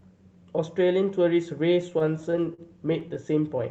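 From 1.81 s to 3.17 s the speech shows repeated stalls (stutter): fifteen short hesitations, the longest about 44 ms, adding up to roughly 178 ms, or about 13% of that stretch. Audio packets arrived late or slower than playback, so the jitter buffer kept draining, and the receiver held and extended the last sound until data resumed. Nothing is lost, but the speech drags and judders, heard over an Opus-coded band that tops out near 8 kHz.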